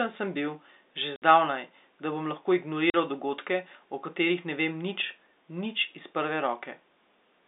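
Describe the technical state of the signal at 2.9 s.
At 2.9 s the speech drops out abruptly for 40 ms, from 2.90 to 2.94 s, just after "da bom lahko" and before "dogodke o katerih ne", with a hard edge at each end of the gap. This is packet loss filled with silence: packets of the call failed to arrive and the receiver played silence in their place. A 40 ms hole fits two 20 ms packets lost in a row. Around the gap, the G.711 telephone band stays confined to roughly 250 Hz to 3.7 kHz.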